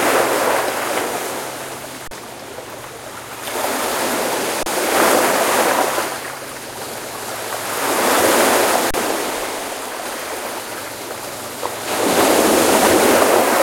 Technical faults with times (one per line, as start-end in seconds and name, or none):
2.08-2.11 underrun with held sample
4.63-4.66 underrun with held sample
8.91-8.94 underrun with held sample